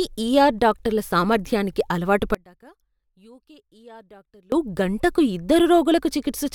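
At 2.35 s the speech cuts out abruptly until 4.52 s, about 2.2 s lost: an audio dropout to a faint residue. Sound about 25 dB down lingers, likely from a live path that lost its signal. Hard edges, not a taper, distinguish it from a pause or fade.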